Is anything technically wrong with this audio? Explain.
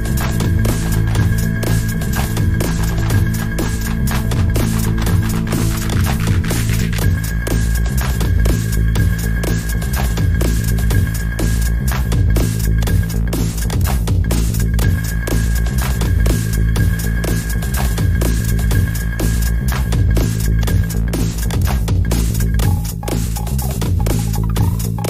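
No, nothing here sounds technically off to my ear, so this one's fine as it is.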